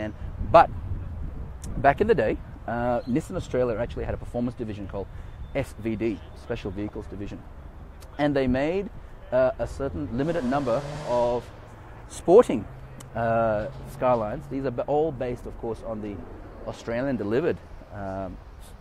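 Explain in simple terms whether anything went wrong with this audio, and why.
Nothing went wrong here: no dropouts, clicks, distortion or level jumps can be heard anywhere in the recording.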